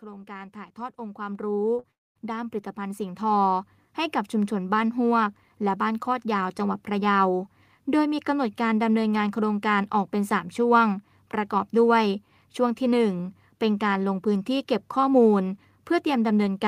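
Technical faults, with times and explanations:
0.05 to 6.86 s, automatic gain rising: the level creeps up by about 16 dB over nearly seven seconds, with the speech and the background noise swelling together. That's the gain control deciding the input was too quiet and slowly turning itself up.
1.79 to 1.85 s, short concealed packet loss: roughly 40 ms of audio didn't arrive in time, so the decoder patched the gap by extending the previous sound and blending back in. You hear it as a quick smear or wobble rather than a clean cut.
1.91 to 2.17 s, long network dropout: about a quarter second goes missing. The last sound is stretched into a fading buzz or hiss, then near-silence, and speech resumes with that chunk gone. This is likely a network outage where packets simply stopped coming.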